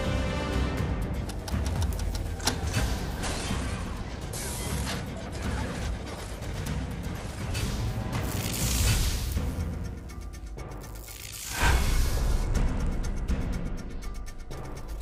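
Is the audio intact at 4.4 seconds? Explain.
No. At 4.43 s there is a dropped buffer (overrun). About 10 ms of sound is skipped with no gap, likely because samples weren't collected in time. It's heard as a jump in the sound.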